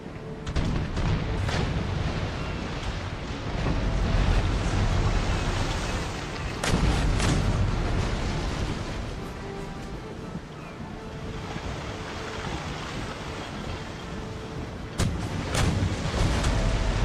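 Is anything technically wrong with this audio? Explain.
Yes. Compressed frames are skipped at 3.66, 6.82, 8.69, 10.10, 12.53 and 15.04 to 15.06 s. The sound jumps ahead by roughly 50 to 150 ms each time, which fits 10 ms frames.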